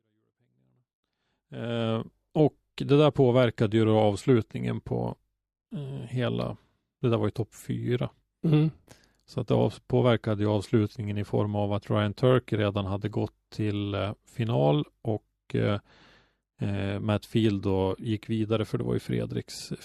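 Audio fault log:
Nothing stood out on listening to this speech.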